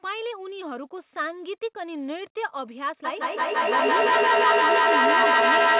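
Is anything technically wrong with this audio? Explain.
Yes. From 3.05 s to the end, each word comes back again and again at a short, regular spacing of roughly 150 ms. The repeats grow thinner and more ringing, and instead of fading they build up until they peak at about 10 dB above the speech itself. This is feedback echo between two devices. One device plays what the other's microphone sent, and that microphone hears it again. Neither echo canceller removes sound from the other device, so the loop keeps feeding itself. The echoes share the call's narrow G.711 band, with nothing above 4 kHz.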